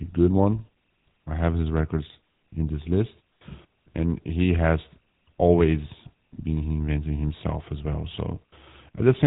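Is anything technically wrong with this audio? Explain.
Yes. Throughout, the speech carries GSM full-rate codec damage. The codec rebuilds speech from sparse pulse excitation, which fits a 13 kbps rate. Nothing passes above 3.8 kHz, and voices sound buzzy and gravelly.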